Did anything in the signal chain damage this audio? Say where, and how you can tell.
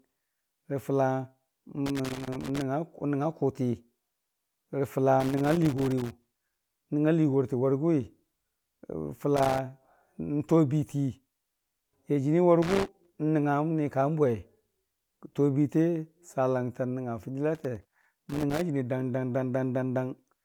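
Yes. Loose connector crackle in the analogue wiring chops the speech at 1.86–2.62 s, 5.20–6.77 s, 9.37–9.59 s, 12.62–13.12 s and 17.55–18.62 s. Each is an irregular scratchy burst: a worn contact making and breaking as it moves.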